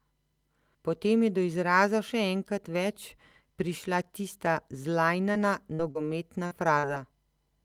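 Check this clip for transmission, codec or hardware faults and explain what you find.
The clip has five instances of short concealed packet loss, clustered late: 5.31–5.38, 5.75–5.82, 5.91–5.98, 6.47–6.54 and 6.79–6.86 s. Each time about 40 ms of speech arrived too late, and the decoder extrapolated the preceding sound to cover it, leaving a brief smear or wobble before blending back.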